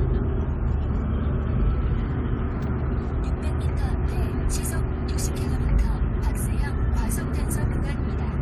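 At 2.98 to 3.03 s, and again at 7.94 to 8.00 s, there is damaged data in the compressed stream. Corrupted bytes make the decoder misread frames and lose sync while it hunts for the next header. Each event is a brief blip lasting about 60 ms.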